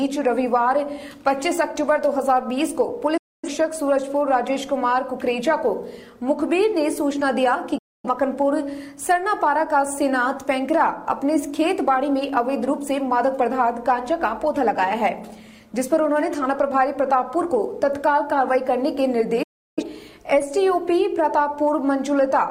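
Digital broadcast dropouts at 3.17–3.49 s, 7.78–8.09 s and 19.43–19.83 s: the receiver lost valid frames and muted, each time fading out in about 8 ms to silence. The sound resumes later in the programme, with roughly 256 ms, 256 ms and 341 ms of material missing.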